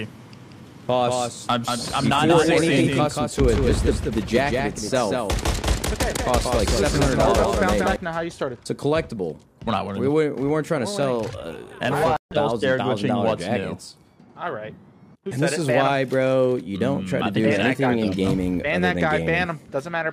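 Until 7.96 s, a doubled audio track: a dry, quieter copy trails about a fifth of a second behind, likely from a second capture path, ending abruptly.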